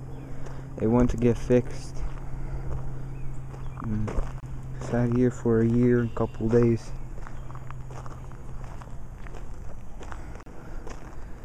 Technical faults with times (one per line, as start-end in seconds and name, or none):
4.40-4.43 gap at a join of encoded pieces
10.43-10.46 gap at a join of encoded pieces